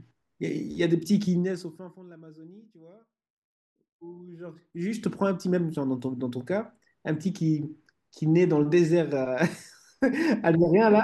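From 1.28 to 2.06 s, a fine ticking buzz rides on the speech as the level falls by roughly 25 dB, and the same zipping returns from 4.15 to 5.05 s as it climbs back up by a similar amount. This is zipper noise: the gain moves in many small unsmoothed jumps, at roughly 200 per second, rather than gliding, and each jump leaves a tiny click that adds up to the audible buzz.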